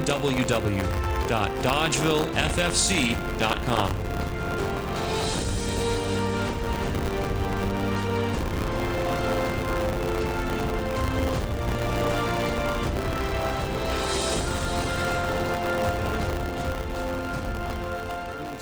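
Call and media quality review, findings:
Buffer tearing, whole clip. Robotic rattle at a steady 100 Hz, present only while sound plays. Points to a 10 ms playback period. Writer and hardware read pointer slipped. About a tenth of each period replays audio some 30 ms old, hard-spliced both ends.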